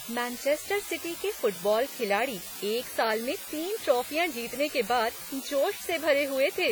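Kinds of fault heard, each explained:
Low bit depth with dither: the speech is held to roughly 5 bits, with dither added before rounding, so the rounding error turns into a steady, even white hiss, loud at only about 10 dB below the signal, running throughout without any grinding distortion.
WMA compression: heavy transform-codec damage, likely from a WMA encoder at a low bitrate around 32 kbps, smears quantisation noise across long blocks of tens of milliseconds and drops weak spectral lines, leaving the speech ringing and washy with a hiss that breathes along with it.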